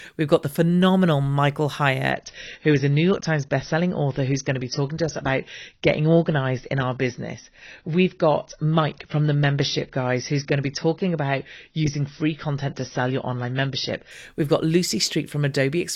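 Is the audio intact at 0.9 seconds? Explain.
Yes, the speech at 0.9 seconds is intact, with no fault audible at that moment.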